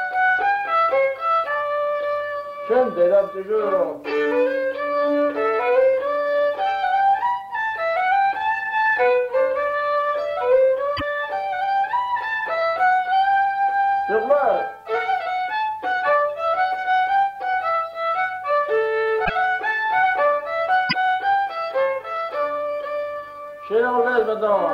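At 10.96 s, 19.24 s and 20.89 s the sound skips forward, with a garbled glitch of about 55 to 60 ms, roughly two 26.1 ms frames. The likely cause is a broken MP3 bit reservoir: after dropped frames, the next frames borrow the wrong bytes.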